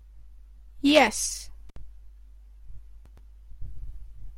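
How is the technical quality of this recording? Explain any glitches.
One glitch interrupts this speech recording. Intermittent contact, at 1.69 to 1.76 s: a loose cable or plug briefly loses its connection, so the signal path opens for about 62 ms. The speech drops out abruptly, with crackle at the break and reconnection and faint hiss in the gap.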